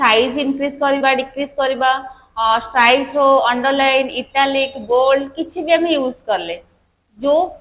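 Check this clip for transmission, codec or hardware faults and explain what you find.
There's one transmission fault, a short concealed packet loss at about 0.98 to 1.03 s. Roughly 30 ms of the call didn't reach the decoder in time, and the receiver covered about 22 ms of that gap by stretching out the last sound it had, copying its pitch if it was tonal or using shaped noise if not, before easing back into the real stream. You hear it as a quick smear or wobble right there. The band tops out at 4 kHz, which fits a G.711 mu-law call leg at 64 kbps.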